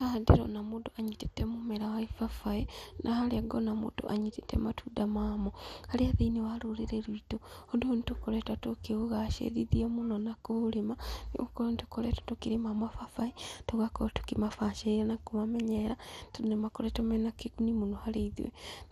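Speech that sounds dull from start to finish, with a gurgling, granular roughness clinging to the voice and nothing present above about 15.1 kHz. That points to MP2 compression, likely at a low bitrate in the region of 80 kbps: the encoder divides the signal into 32 sub-bands and runs short of bits, so upper bands drop out and flicker while the remaining ones are quantised coarsely, producing the muffled, watery texture heard throughout.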